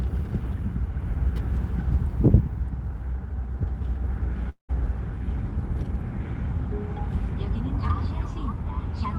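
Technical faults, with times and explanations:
4.49 to 4.71 s, long network dropout: the sound breaks off and is continued by a fading, buzzy smear that lasts nearly the whole gap, with about 120 ms of near silence at its quietest, before the audio resumes with a 200 ms stretch simply missing. This is likely a run of lost packets on the call path, where the receiver extrapolates the last audio to conceal the hole and then gives up. The fill is coloured like the surrounding Opus-coded audio, band-limited to about 12 kHz.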